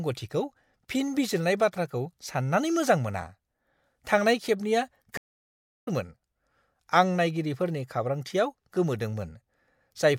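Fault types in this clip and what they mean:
Stream reconnect: the connection dropped at 5.17 s, leaving about 0.69 s of silence until 5.88 s while the player reconnected and spun up a fresh decoder. When sound comes back it has jumped ahead, roughly half a second later than where it cut out, so that chunk of speech is just gone.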